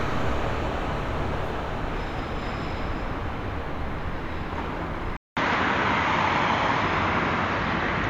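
At 5.17 s a gap of 200 ms breaks the sound, which returns duller, with nothing above 7.1 kHz, a level shift of around 5 dB and a new faint noise floor. That points, likely, to an input switched to a poorer device, rather than simple filtering.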